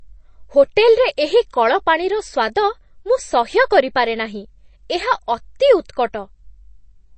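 From the first moment to the end, the speech carries plainly audible MP3 compression damage, likely from encoding at a starved bitrate, which fits roughly 32 kbps. Nothing survives above 8.3 kHz, so s sounds lose their edge, and the weak frequency lines flicker in and out between frames, giving a watery, swirly texture. That shifting swirl separates it from a simple low-pass filter, which would dull the treble but leave the rest steady.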